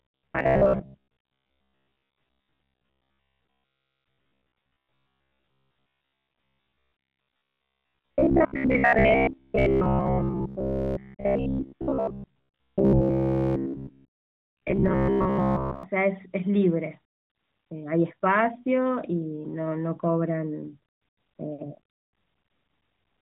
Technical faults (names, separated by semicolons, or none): robotic sound from repeated short buffers